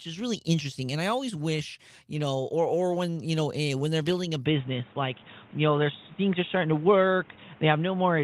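From 4.46 s, right after "when they're building a", the speech suddenly goes dull and boxy, with nothing above 3.8 kHz, a shift in level of roughly 5 dB, and new background noise well below the voice. That's likely the input switched to a poorer device.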